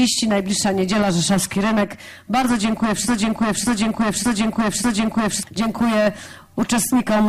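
At 3.08 s a broken-record loop begins: a 0.59 s fragment repeats exactly, back to back, four times until 5.43 s, replacing the audio that should have played there. The likely cause is a player, encoder or stream stall that kept resending its last buffered fragment.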